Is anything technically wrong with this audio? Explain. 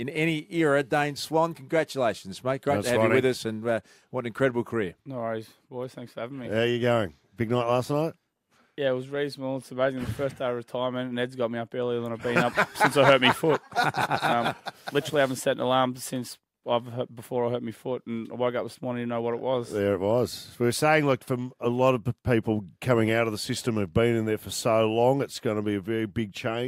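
No, nothing is technically wrong with this audio.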